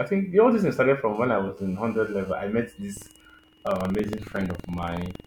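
From 0.65 s to 2.33 s, just after "think the all this" and ending before "I met", a GSM phone buzz sits under the speech. A nearby 2G handset's radio bursts, pulsing at 216.7 Hz, are being rectified by the audio circuitry, producing a hard, raspy buzz about 29 dB below the speech. Because the phone is moving data rather than holding a call, the buzz cuts in and out. On a spectrogram it appears as a ladder of horizontal lines at 217 Hz and its harmonics, in broken segments that ignore the speech's own structure.

From 2.93 s, right after "I met", to the end, buffer tearing gives the speech a robotic rattle at 21.5 Hz. The write and read positions of the playback ring buffer have slipped so they cross mid-period, and each period's repeat rate fits a 2048-sample buffer at 44.1 kHz. A small slice, around a twentieth of each buffer, replays audio from roughly 150 ms earlier, with abrupt joins at both edges. 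The waveform shows sudden discontinuities about 46 ms apart, and the spectrogram shows evenly spaced vertical broadband streaks that appear only while speech is present.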